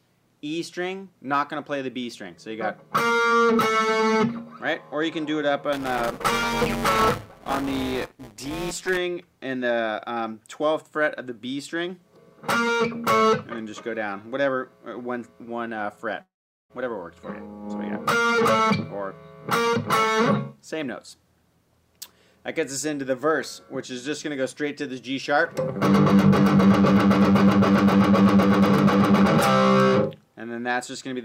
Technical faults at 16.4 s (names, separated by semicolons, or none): long network dropout